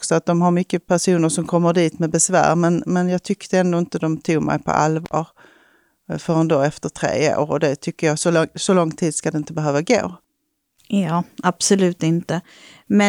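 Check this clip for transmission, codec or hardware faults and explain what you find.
One hardware fault turns up in the speech, an intermittent contact.

From 5.05 to 5.13 s, right after "de tog mig på", the signal drops out for roughly 48 ms between short crackles at each edge, and only faint hiss fills the gap. This sound points to a loose cable or plug briefly losing connection. The contact scrapes as it opens and recloses, which causes the crackle, and while the path is broken almost nothing of the source reaches the recording.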